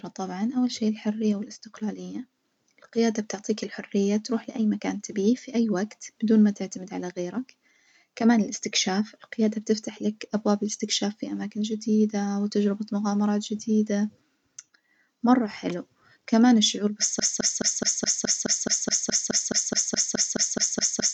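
Right after "مرة حلو كمان الشعور", at 17.2 s, the speech hits a broken-record loop: a 0.21 s fragment repeats exactly, back to back, 19 times until the end. The stream likely stalled and kept resending its last chunk, so the speech that followed is gone.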